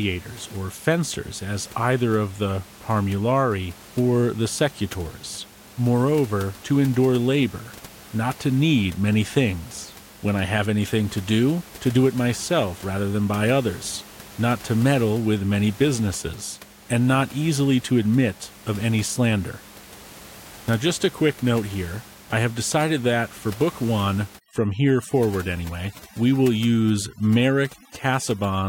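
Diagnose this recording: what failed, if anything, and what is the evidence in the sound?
Overdone noise removal sets in at 24.4 s and runs to the end at 28.7 s. This is a call-processing stage. A noise suppressor set too aggressively cuts bands near its noise estimate, leaving near-silent gaps with twinkling specks. The room noise, about 22 dB under the speech, is what it was attacking.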